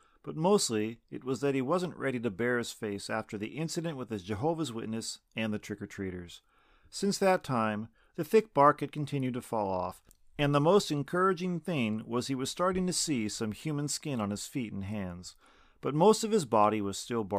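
A speech recording with a single tick or dip at 7.37 s. That is a block of digital silence lasting only 0.25 ms. The signal drops abruptly to silence and returns with no fade, so the two hard edges merge into one tick or dip rather than an audible gap.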